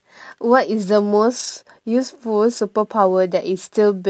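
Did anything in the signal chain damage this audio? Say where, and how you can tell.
Yes. At the network stage, lost packets were rebuilt from error correction: from 1.39 to 1.49 s, about three 20 ms packets, and from 2.57 to 2.59 s. The decoder played a rougher, noisier low-bitrate copy instead of leaving a gap. The spectrogram shows grainy, smeared patches with no dropout in the waveform, inside the Opus call band that stops near 8 kHz.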